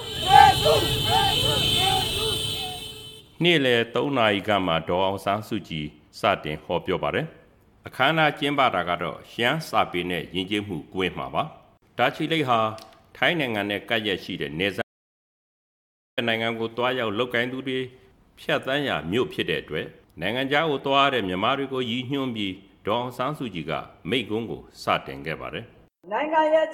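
At 14.82 s the audio drops out to silence for 1.35 s until 16.18 s, with no room tone; a lost input or link is the likely cause.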